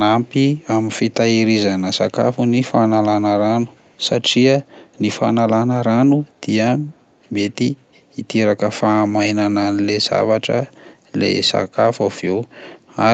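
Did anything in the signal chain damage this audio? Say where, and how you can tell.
Yes, echo leak at 3.72–3.99 s and 6.95–7.04 s: very faint speech repeating 310 ms late, likely the far end's echo canceller missing some loudspeaker pickup.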